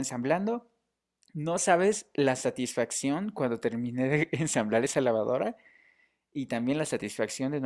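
No technical faults can be heard anywhere in the speech recording, and the signal stays continuous and intact throughout.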